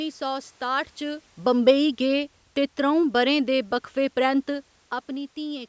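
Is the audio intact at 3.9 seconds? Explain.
No. From 1.46 to 4.49 s, automatic gain falling lowers the level by about 3 dB, so the speech and its room background sink together.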